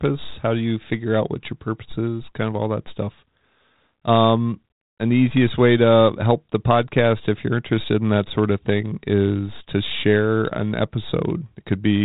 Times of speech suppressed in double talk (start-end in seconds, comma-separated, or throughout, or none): none